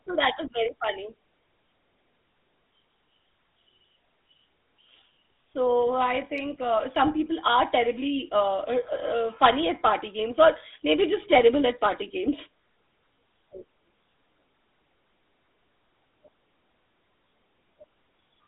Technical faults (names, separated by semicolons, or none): GSM full-rate codec